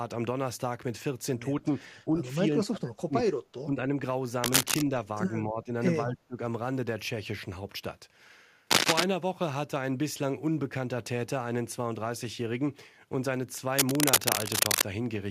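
The speech dips at 1.64 s, 1.89–2.27 s, 2.6–3.35 s, 3.64–3.86 s, 5.42–5.7 s and 6.05–6.36 s, from a slight drop to about 30 dB at 2.6 and 6.05 s. This is speech suppressed in double talk, likely an echo canceller turning down this talker while the far side spoke.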